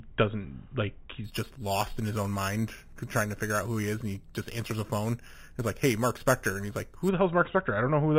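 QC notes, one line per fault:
1.24–7.09 s, imaging from sample-and-hold upsampling: just after "doesn't like", the speech picks up a bright metallic fizz that rises and falls with its level. Each sample appears to have been repeated without a smoothing filter, which fits an 8 kHz source raised to 48 kHz, so mirrored copies of the spectrum fold upward. On a spectrogram the first image fills 4–8 kHz, about 15 dB below the speech, with its harmonics sloping opposite to the pitch; the waveform shows fine stair-steps.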